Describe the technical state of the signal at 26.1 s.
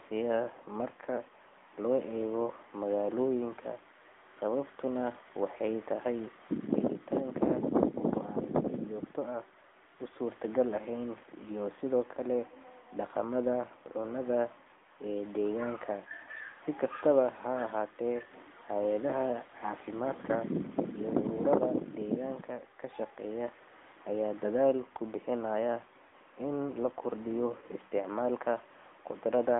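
At 26.1 s there is a burst of lost AMR speech frames, from 26.08 to 26.13 s. It falls between "aya daadl kubihinayaan" and "in lakordiyo isticmalka". The gap lasts about 40 ms, which fits two missing 20 ms frames. The decoder reuses the last good pitch and vocal tract settings with falling gain, so there is a brief dip or warble.

The AMR narrowband mobile codec also shapes this moment, as it does the whole clip. The band runs only from 250 Hz to 3.5 kHz. Speech sounds buzzy and synthetic, which points to a mode near 10.2 kbps. The codec damage is plainly audible.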